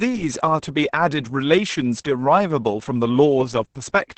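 Speech runs the whole way through sounding muffled, hoarse and faintly robotic, with nothing above about 8 kHz. That is heavy Opus voice compression: the SILK linear-prediction coder has restricted the band to wideband and coded the excitation signal crudely. The depth of the damage points to a low bitrate, around 10 kbps, coded in 20 ms frames in SILK mode.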